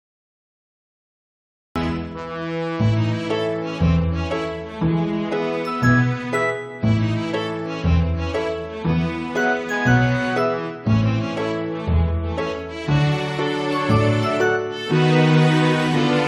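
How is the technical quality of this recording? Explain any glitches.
The recording has one clear fault, a cut-off start. The first 1.76 s are digital silence, and at 1.76 s the sound appears abruptly, already in progress, with no attack or fade-in. Capture evidently began late, so the opening of that sound was never recorded and playback jumps straight into its middle.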